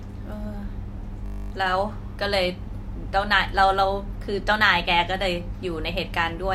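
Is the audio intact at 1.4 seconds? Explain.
No. At 1.4 seconds the speech is caught in a system hang loop running from 1.26 to 1.52 s. The host or driver stalled while the audio hardware kept replaying the same 20 ms ring buffer, so one slice of sound repeats exactly, 13 times in a row. With a period that short, the repetition fuses into a steady buzz at 50 Hz rather than a stutter. Once playback resumes, essentially no audio is missing.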